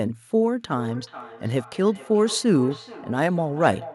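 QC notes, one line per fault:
0.52–3.95 s, feedback echo between two devices: the speech returns at a fixed interval of roughly 0.4 s, peaking about 17 dB below the direct sound. A second device in the room replays this microphone's signal, which is picked up again; neither device's echo canceller removes the other's playback.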